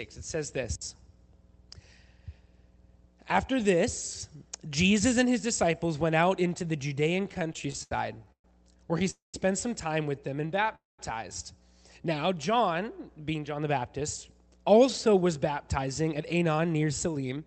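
From 7.23 to 8.45 s, repeated stalls (stutter) break up the sound. Packets arrived later than they were played, so the jitter buffer kept running dry. About a dozen brief holds, the longest 119 ms, add up to 315 ms, roughly a quarter of the span. Each hold repeats the last sound, so the audio drags and hiccups. On a spectrogram, short smeared or repeated slices interrupt the texture, and the waveform shows small stretched plateaus.

A call audio freeze follows at 9.10 to 9.35 s, and another at 10.75 to 11.00 s. Each lasts about 230 ms, most likely because packets were held up in transit. The final sound is extended as a fading buzz, then 160 ms and 190 ms of silence before the audio resumes where it stopped. The waveform shows a decaying tail and then a flat gap. The spectrogram shows a blurred band trailing into an empty column.

Between those two freezes, from 10.30 to 10.67 s, a jitter buffer slow-down stretches the audio by 48 ms, to 89% speed. 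To rebuild its reserve, the receiver repeated pitch periods, so sounds are drawn out at unchanged pitch. The spectrogram shows unchanged harmonic spacing with elongated features, and the waveform shows near-identical repeated cycles.

Jitter buffer speed-up then trims the audio at 13.54 to 14.01 s, at 107% speed with around 40 ms removed. It happens again from 14.69 to 17.40 s, at 106% speed with roughly 200 ms removed. Short pitch-period pieces were cut out, which makes the audio sound slightly hurried at the same pitch. On the spectrogram, events sit closer together while the harmonics stay put. Throughout the clip, the Opus call path's 8 kHz bandwidth appears as a clean ceiling on the spectrogram.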